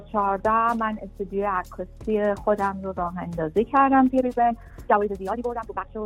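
From 4.06 s to the end, a time-stretched section plays at double speed with unchanged pitch. It sounds rushed. Software likely dropped short pieces to shorten it.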